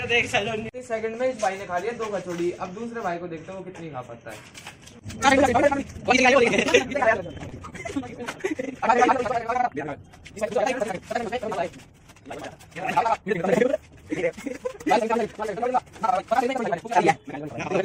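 Two short network hiccups sit close together in this audio, both around 7.5 to 7.7 s. First, at 7.49 to 7.54 s, there's a short stall from a late packet: a packet didn't turn up on time, the jitter buffer ran dry, and the receiver held the last bit of sound for about 24 ms until it arrived. Nothing is lost; the sound just hangs a touch too long, with a faint buzz or dip, and everything after it runs 24 ms later than before. Then, at 7.70 to 7.74 s, comes a short concealed packet loss. This time 20 ms of audio never made it to the decoder, and the receiver papered over the gap with about 21 ms of its own guess, extending what came before and then blending back into the real signal. It comes across as a quick smear or wobble, and a brief sound in that gap can simply drop out.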